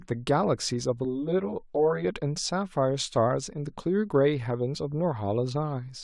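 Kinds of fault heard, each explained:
Channel delay (comb filtering): one channel of the speech arrives about 10 ms behind the other, and when the two are folded to mono the shared content cancels at evenly spaced frequencies, with the first notch somewhere near 50 Hz and further notches roughly every 100 Hz above it. From 1.05 to 2.05 s the speech turns hollow and phasey, thinned by a dense comb of fixed dips across the spectrum.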